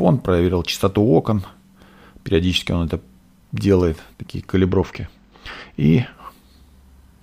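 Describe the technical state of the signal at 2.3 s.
At 2.3 s the signal is intact, with no audible technical fault at that point.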